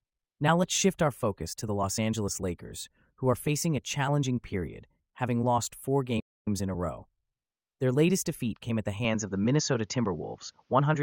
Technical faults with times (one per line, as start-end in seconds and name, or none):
6.19-6.48 playback stall
9.05-11.02 input switched to a poorer device